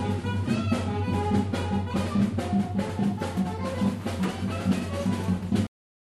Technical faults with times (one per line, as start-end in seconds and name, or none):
5.67-6.15 cut-off end